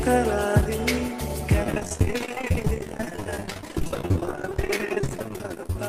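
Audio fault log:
1.62–5.79 s: repeated packet loss (robotic sound). Dropouts up to 29 ms keep getting patched by repeating the last sound, leaving nearly half the stretch choppy, with pieces missing.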